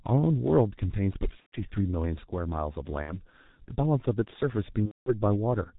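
Speech, coded throughout with the G.723.1 codec. Nothing above 4 kHz is present, so the sound is muffled and hoarse, and the consonants are smeared. The damage is heavy, which fits a low-rate mode of about 6.3 kbit/s. The coder models the vocal tract only once per 30 ms frame, so fast changes between sounds lag and blur. VoIP packet loss concealed by the speech codec occurs at 1.40 to 1.55 s, 3.02 to 3.13 s and 4.86 to 5.14 s. In each gap the decoder repeats its last pitch and filter settings at a falling gain, which turns the sound into a fading buzzy or tonal stretch. Speech then stays weak or warped briefly after each gap while the frame-to-frame state recovers. The gap lengths fit runs of four, two and seven lost 30 ms frames.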